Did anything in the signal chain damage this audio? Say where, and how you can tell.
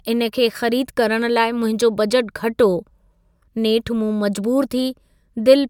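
No, no damage is audible.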